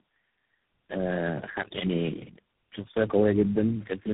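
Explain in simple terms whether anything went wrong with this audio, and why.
Yes. Throughout, tandem speech coding: several different phone codecs in a row each re-squeezed the speech, so it sounds rougher and more warbly than any single low-quality link, and is muffled above 3.8 kHz.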